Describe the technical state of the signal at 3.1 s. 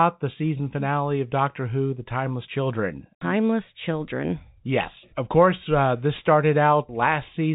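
At 3.1 s the audio is intact, with the G.711 telephone coding band-limiting the speech to below about 3.8 kHz.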